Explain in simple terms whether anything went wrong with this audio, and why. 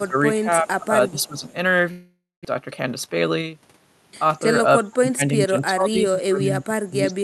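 A few things go wrong in this speech clip, and they're all typical call problems.

The most frequent is speech suppressed in double talk. The voice gets turned down or partly cut at the very start (0 to 0.16 s), briefly at 0.62 to 0.68 s and 0.87 to 0.92 s, then more noticeably from 1.1 to 1.45 s. The biggest dips come from 4.78 to 5.22 s and from 5.46 s right to the end, where the voice sinks quite a lot. What's likely happening is that the other person was talking too, and the echo canceller couldn't tell this voice apart from the loudspeaker echo, so it ducked this voice along with the echo.

There's also a faint echo leak at 0.66 to 0.85 s and again at 1.09 to 1.55 s. A very quiet copy of the voice comes back about 0.36 s late. It's likely the far end was on a loudspeaker and its echo canceller didn't catch all of what its mic picked up, so a bit got sent back.

Around 1.91 to 2.47 s there's a long network dropout. 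The sound carries on as a fading buzz for about half a second to cover the gap, then goes quiet for roughly a fifth of a second. When the audio picks up again, about 0.4 s of the original is simply gone. The likely cause is that nothing arrived over the network for that stretch, so the receiver papered over it and then skipped ahead.

Right after that, from 2.6 to 3.54 s, there's a jitter buffer speed-up. The audio plays about 10% fast at the same pitch, so it sounds a little hurried. After the hiccup the receiver was holding more audio than it wanted, so it trimmed tiny slices over and over, about a tenth of a second in total, to catch back up.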